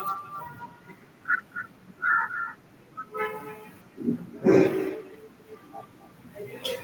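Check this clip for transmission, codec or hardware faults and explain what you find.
One fault runs through the whole clip: echo with no canceller. The far end plays the call over a loudspeaker, its microphone picks it up, and nothing subtracts it, so every phrase returns around 300 ms later as a thinner copy about 16 dB down.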